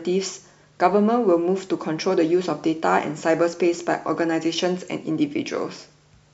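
No audible technical faults occur anywhere in this recording.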